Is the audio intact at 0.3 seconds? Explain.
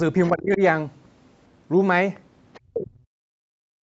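No. From 0.24 to 0.30 s there is other side's voice leaking through, likely because the echo canceller failed to fully remove loudspeaker playback picked up by the microphone. A faint second voice, roughly 35 dB below the talker, slips in briefly.

Overlapping that, speech is suppressed in double talk from 0.29 to 0.61 s, likely because the canceller couldn't separate the talker from the echo and turned both down. The speech dips by up to around 20 dB for about a third of a second.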